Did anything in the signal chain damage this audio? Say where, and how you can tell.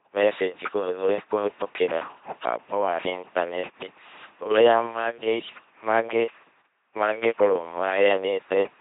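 Yes. The speech buzzes mechanically from start to finish, with nothing above 3.8 kHz. That is heavy codec damage from an LPC-10 vocoder, which fits a 2.4 kbit/s link. It rebuilds the voice by driving a small resonant filter with either a pulse train or noise.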